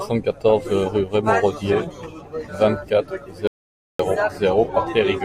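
At 3.47 s the speech cuts out mid-flow into an audio dropout to silence lasting about 0.52 s, until 3.99 s. The gap is dead silence with no room tone, unlike a natural pause, which likely means the input was lost while recording continued.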